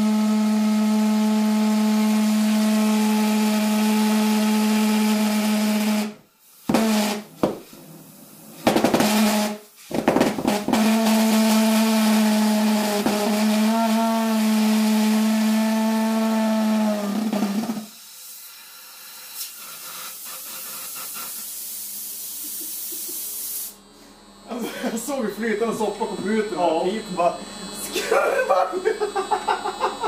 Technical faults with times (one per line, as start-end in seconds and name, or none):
none